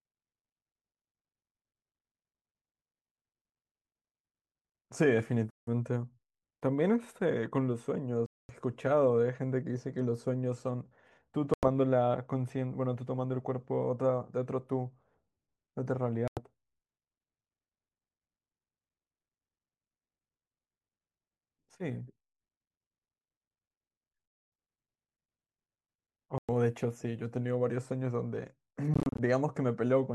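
A speech clip with seven sudden gaps in the sound, heard at 5.50 to 5.69 s, 8.26 to 8.53 s, 11.54 to 11.66 s, 16.28 to 16.41 s, 24.28 to 24.52 s, 26.38 to 26.50 s and 28.94 to 29.20 s. Each hole lasts between about 90 and 245 ms. The last one is broken up, with short bursts of silence up to 30 ms long. The speech resumes as if it never paused. This is likely a Bluetooth dropout, where late packets were discarded.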